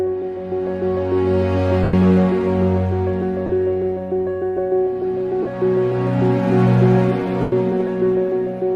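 At 1.83, 3.46, 5.43 and 7.41 s there are lost LE Audio frames, gaps of about 97, 30, 30 and 112 ms. The decoder patches each by recycling the last spectrum with scrambled signs, so tones smear into noise, and the two longer gaps sag toward silence.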